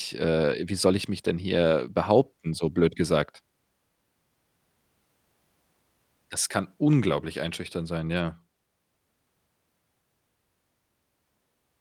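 No technical faults can be heard anywhere in the recording; the speech signal stays intact and continuous for its whole duration.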